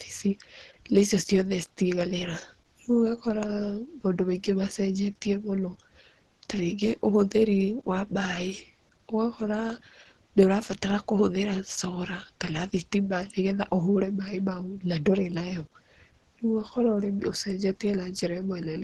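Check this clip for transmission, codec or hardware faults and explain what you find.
One codec fault runs through the whole recording. Opus compression, throughout: the speech sounds muffled and hoarse, with nothing above 12.3 kHz. This likely comes from Opus in its hybrid speech mode, squeezed to a rate that fits about 16 kbps. Unlike MP3's swirling holes, bands are kept filled, so the damage is roughness, not watery artefacts.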